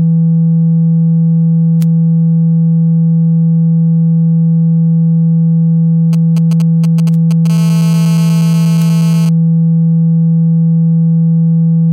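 A nearby 2G phone's signalling traffic, short clusters of radio bursts, is being rectified by the audio circuitry from 6.13 to 7.47 s. The result is GSM signalling bursts: a galloping dit-dit-dit of brief 217 Hz buzzes, sitting roughly 20 dB beneath the wanted sound.

From 7.50 to 9.29 s the phone is in a call and transmitting continuously at 217 bursts per second, and the circuit demodulates every pulse. The result is GSM phone buzz, a hard, raspy, harmonic-rich 217 Hz drone, nearly steady and about 20 dB below the signal.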